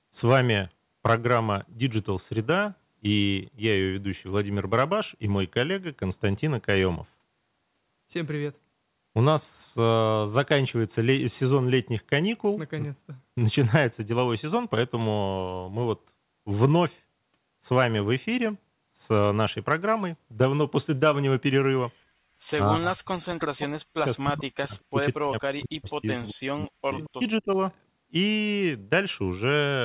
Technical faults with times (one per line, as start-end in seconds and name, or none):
22.66-27.58 speech suppressed in double talk